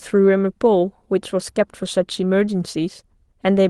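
Speech clip with no technical faults to report.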